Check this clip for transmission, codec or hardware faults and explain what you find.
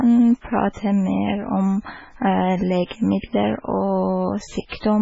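Two codec faults stand out, both tied to lossy compression of the speech.

Throughout, the likely cause is heavy MP3 compression. Starved of bits, the encoder removes everything above 7.6 kHz and drops weak frequency lines, giving dull, watery, swirling speech that fits a very low bitrate near 16 kbps.

Pre-echo appears at 2.86 to 2.91 s and 3.20 to 3.24 s. Quantisation noise spreads across each transform block, so 52 ms and 31 ms of hiss lead into sharp attacks, which sound smeared.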